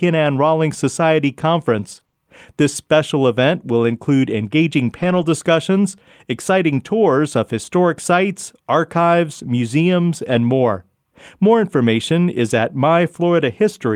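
Between 1.91 and 5.23 s, brief ticks and small smears break up the speech. These scattered short gaps are about four lost packets, each under about 20 ms, patched by extending the preceding sound.

From 10.23 to 10.45 s, and again at 11.45 s, the speech turns briefly rougher and noisier without dropping out. This is a lost packet rebuilt from error correction: 120 ms and then 20 ms were decoded from low-bitrate copies carried in the following packets.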